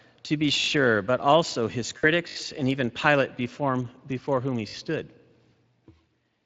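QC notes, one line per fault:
Throughout: Speex codec, a CELP coder at a bitrate that fits roughly 20 kbps, with plainly audible damage, so the speech sounds hoarse and noisy because the excitation is starved of bits.
0.60, 2.28 and 4.68 s: repeated buffer, a 20 ms chunk played again four, four and three more times with hard joins, a quick stutter-buzz where fresh audio arrived late.
1.97 to 2.06 s: VoIP packet loss concealed by the speech codec, right after "but also his", about 60 ms extrapolated into a fading smear that stays weak briefly before "and even".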